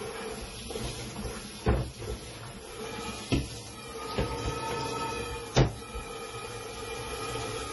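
Everyday sounds run the whole clip with heavy MP3 compression damage, likely from a very low bitrate near 32 kbps. Nothing remains above 11.5 kHz, a flat ceiling on a spectrogram. Weak detail flickers as scattered patches, sounding watery and swirly, and attacks look smeared in the waveform.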